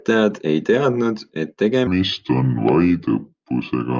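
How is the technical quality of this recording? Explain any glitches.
The first part is clean, but one fault takes over from 1.87 s to the end. A wrong sample rate drops the speech to 0.726 times normal speed and about 5.6 semitones lower. The voice turns low and dragging. That fits audio recorded near 22 kHz but played at 16 kHz, with no conversion between the two rates.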